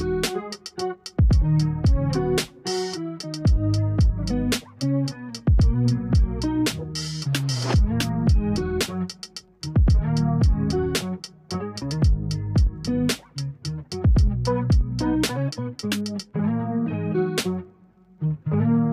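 No technical faults can be heard anywhere in this audio.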